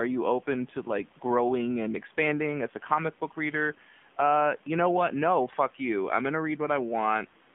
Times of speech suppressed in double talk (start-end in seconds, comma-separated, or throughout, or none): none